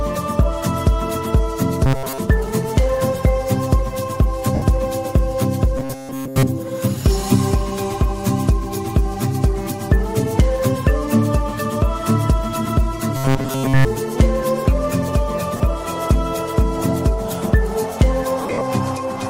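Robotic sound from repeated short buffers at 1.86 to 2.18 s: a rigid 134 Hz buzz, likely from audio arriving too seldom so roughly 7.5 ms chunks loop over much of it. Lost LE Audio frames at 4.55 to 4.62 s: a 70 ms noisy smear as the LC3 decoder reuses the previous spectrum with random signs, which fits seven 10 ms frames. The same robotic buzz returns at 5.78 to 6.43 s and 13.17 to 13.85 s, here replacing the audio entirely with repeats. Lost LE Audio frames recur at 15.57 to 15.60 s, a 30 ms smear, and at 18.41 to 18.61 s, where 140 ms of gaps scattered over 200 ms, the longest about 50 ms, fade toward silence.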